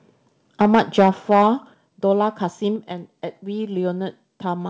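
From 0.6 to 1.47 s the speech runs into microphone overload: the loudest peaks drive about 6 dB past the converter's ceiling, and their tops are flattened, affecting a few percent of the samples in that stretch. The likely cause is an input gain set too high for the talker's level. Clipping that hard adds a gritty, crackling edge to the strongest syllables, which sounds brittle rather than merely loud.

During that overload, at 0.75 s, the level drops abruptly by about 2 dB, a microphone volume step-down. A second, larger step of about 6 dB follows at 1.74 s, just after the distorted passage ends. Each is most likely the call software's automatic gain control lowering the device input in a single move after detecting clipping. Voice and background fall together instantly, with no fade, so the drops read as sudden shifts in loudness. Through the call path the audio carries nothing above 8 kHz, consistent with a wideband codec.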